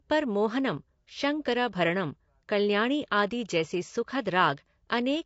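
From start to end, the speech sounds rough and grainy, with a hiss-like texture filling the gaps between the pitch harmonics. That points to low-delay AAC compression, likely AAC-ELD at a bitrate that fits around 32 kbps. Its frames of roughly 10 ms get few bits at this rate, so coarse quantization spreads noise between the harmonics. That steady graininess on voiced sound sets it apart from standard long-frame AAC, whose low-bitrate damage tends toward pre-echo smearing before sharp onsets.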